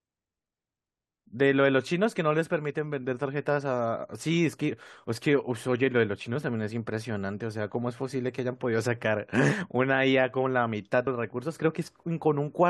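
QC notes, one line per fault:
11.06 s: compressed frames skipped. The speech jumps forward by roughly a tenth of a second, which matches about four frames at a frame length of about 21.3 ms. Those whole frames were never decoded, either because they were absent from the stream or because the decoder rejected them as corrupt. The audio on either side is joined across the gap. The result is a short jump at the join, with a small piece of the speech missing.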